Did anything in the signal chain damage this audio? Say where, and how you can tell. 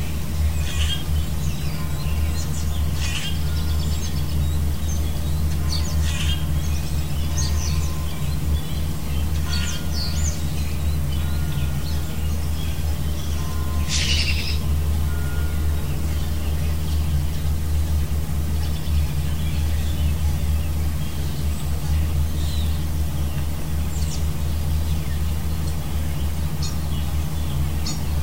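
No, nothing along the signal chain has left an audible mark on this sound recording, which arrives at the end of its path intact.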